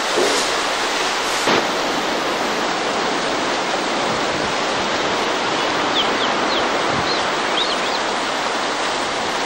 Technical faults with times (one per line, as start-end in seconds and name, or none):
0.00-2.62 unreliable data bit